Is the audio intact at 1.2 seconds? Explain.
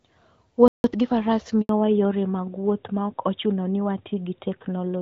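Yes, at 1.2 s itself, but a time-compressed catch-up ends just before it, running 0.84 to 1.16 s. The player cut and cross-faded small pieces to play 1.5 times faster, so speech sounds hurried at normal pitch. Spectrogram harmonics stay level while syllables compress, with small waveform splices.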